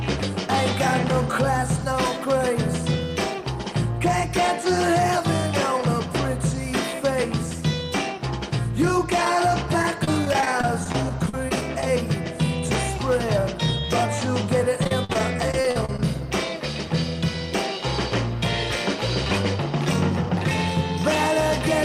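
Choppy, robotic stretches run from 9.82 to 11.83 s and again from 14.84 to 15.99 s. This is repeated packet loss (robotic sound). Short holes, up to 36 ms and then 47 ms, keep getting patched by stretching the last sound. That concealment fills about a quarter of the second stretch.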